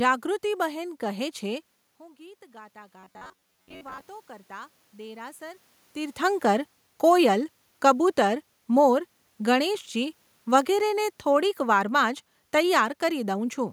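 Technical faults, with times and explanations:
0.71 to 5.69 s, automatic gain rising: the input dropped about 21 dB, and the gain control gradually added about 8 dB, so voice and room noise swell together.
3.00 to 4.07 s, robotic sound from repeated short buffers: audio likely arrived too seldom, so about half the time was filled by replaying short chunks, forcing a rigid metallic 93.8 Hz buzz.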